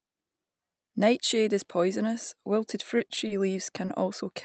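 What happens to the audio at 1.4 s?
Nothing goes wrong at 1.4 s: the speech carries on intact through the call path, with no dropout, glitch or distortion at that point.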